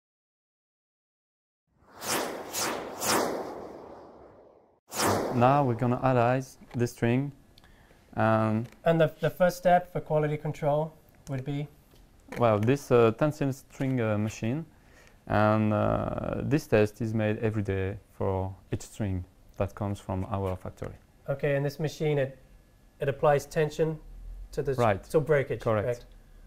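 No technical faults can be heard anywhere in this audio. Nothing in the sound points to a problem with how it was recorded, processed or played back.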